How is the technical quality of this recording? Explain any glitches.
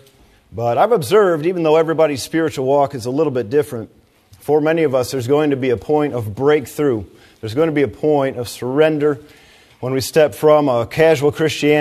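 There is one glitch, at 5.81 s. It is an overlap between stream segments. Two adjacent segments claimed the same few milliseconds, so the player dropped the supposed duplicate. That sound was never doubled. Roughly 6 ms vanished, the waveform jumped, and a tiny skip results. The timing fits a boundary between 6-second segments.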